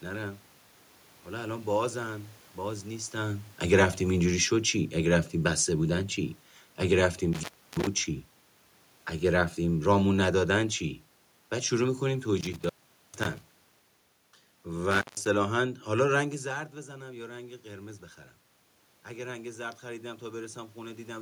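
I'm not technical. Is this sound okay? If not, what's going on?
No. From 4.06 to 6.14 seconds there is automatic gain falling. The recording device decided the input was too loud or too noisy and gradually turned itself down, so the speech and the background room sound sink together. That's different from the talker moving around near 3 and 16 seconds.

There are three drops from an intermittent contact, meaning a loose cable or plug briefly losing its connection. The sound cuts out with a crackle at each edge, at 7.33 to 7.87 seconds (out for about a third of a second), 12.41 to 13.42 seconds (nearly half a second), and 14.91 to 15.27 seconds (under a fifth of a second).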